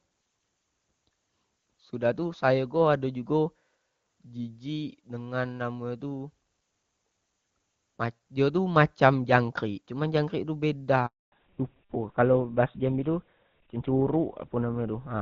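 At 11.06 s the speech breaks off in a handover gap. The call was passed from one network to another, and no speech frames came through during the switch. The sound fades out within a few tens of milliseconds and stays silent for 260 ms, until 11.32 s. On the waveform this is a short taper into a flat line. On a spectrogram it is a blank vertical strip across all frequencies. Whatever was said in that span is lost.

From 11.32 s to the end there is a fallback to narrowband. Before the switch, the wideband (HD Voice) coding is clean and points to AMR-WB at a high rate such as 23.85 kbit/s. After it, the sound fits an older narrowband codec like GSM full rate. Nothing above 4 kHz survives, so the voice turns dull and rougher, and the sibilants lose their crispness. On a spectrogram the energy that reached up to about 7 kHz is abruptly cut at a hard horizontal ceiling at 4 kHz. The waveform looks smoother and less spiky.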